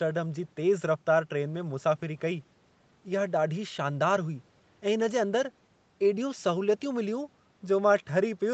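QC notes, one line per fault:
No faults heard anywhere in this speech clip.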